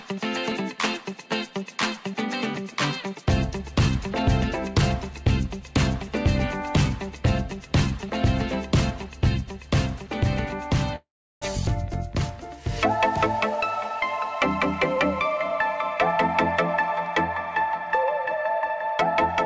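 Between 10.96 and 11.44 s the audio stalls in a call audio freeze: the last sound hangs as a fading buzz or hiss, then roughly 0.36 s of silence, and playback resumes exactly where it stopped. Unlike a packet-loss dropout, nothing is missing; a gap of about 0.46 s has been inserted, likely because packets were held up and the jitter buffer ran dry. From 17.60 to 19.16 s a jitter buffer speed-up drains a buffer backlog, trimming short pitch-period slices, around 150 ms in total, so the sound runs at 110% with a hurried feel. The pitch stays put, which separates this from a resampling or playback-rate error. The G.722 call path's band limit, with nothing above 8 kHz, is present throughout.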